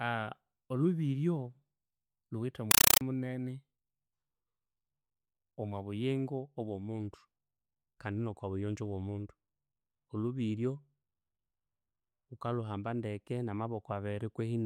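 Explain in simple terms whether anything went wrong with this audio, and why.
At 2.71 s the speech is suddenly replaced by harsh, loud static that chatters until 3.01 s. This is a compressed stream played as audio. Packed digital data, most likely a Dolby Digital stream, reached the speakers without being decoded. Each packet comes out as a short burst of noise, about 5 ms long, then a silent gap. These bursts repeat 31 times a second. That steady repetition is what makes the chattering sound.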